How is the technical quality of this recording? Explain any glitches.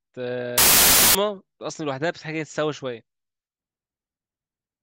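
The recording has one clear glitch. From 0.58 to 1.15 s, samples built from the wrong bytes turn the speech into loud, harsh broadband noise: byte misalignment promotes the rapidly changing low bits to the top of each value. On a spectrogram this shows as a flat, full-band wash, and the waveform becomes a dense block.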